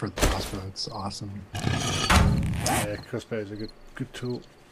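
Nothing in this audio stands out as a technical fault, so there's nothing to flag from the first moment to the last.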